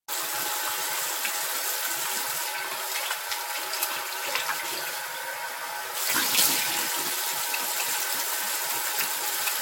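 Throughout the clip, the everyday sound has a swirly, smeared, hollow quality, transients are blurred, and nothing is present above 16.6 kHz. This is generation loss, likely from the audio being decoded and re-encoded several times with a lossy codec such as AAC. What sets it apart from a single low-bitrate encode is the amount of damage. The artefacts are heavier than one pass at a moderate rate would leave, because each re-encode quantises on a shifted frame grid and the noise and spectral holes accumulate.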